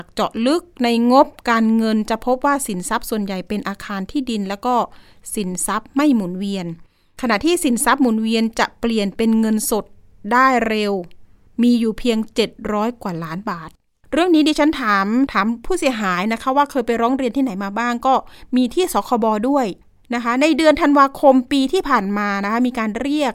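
No technical faults are audible.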